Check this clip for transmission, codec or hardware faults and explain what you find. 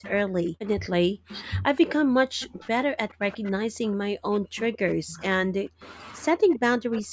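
Three faults affect this speech clip: a doubled audio track running throughout, speech suppressed in double talk across much of it, and seven bursts of echo leak.

Doubled audio track, throughout the 7-second clip. A second, full-band copy of the speech trails the original by about 0.7 s at roughly the same level. The likely cause is the audio being captured again through a slower path, or an edit that left two copies out of step. The lag has no reverberant tail or room colouring. It sounds like a clean, overlapping repeat of every phrase.

Speech suppressed in double talk, from 0.0 to 7.12 s, affecting about 5 s in total. The talker's level sags, goes dull or breaks into pieces, dropping by as much as about 40 dB at its deepest. This likely happened because both sides spoke at once, and the echo canceller could not tell its own talker from loudspeaker echo, so it pulled everything down together.

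Echo leak, at 0.04–0.1, 1.31–1.35, 2.42–2.47, 3.32–3.37, 4.58–5.22, 5.83–5.91 and 6.53–7.01 s. A faint copy of the voice returns 126 ms late, about 15 to 30 dB below the speech. It is loudest near the end and longest at 4.58 and 6.53 s. The likely cause is a loudspeaker on one end whose echo canceller failed to remove everything its microphone picked up. The rest was sent back. Like all the audio here, it stops at 8 kHz, in line with normal call microphone processing.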